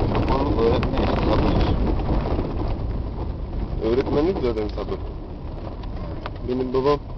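No faults are audible in the clip.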